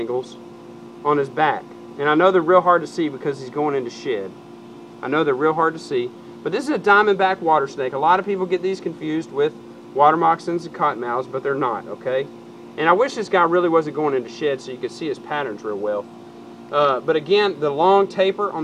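Nothing goes wrong anywhere in this audio; there's simply no technical fault to point to at any moment.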